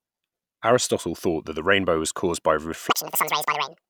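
Speech clip; from 2.90 s to the end, just after "rainbow was caused by", the audio is read two samples at a time, running double speed, an octave high.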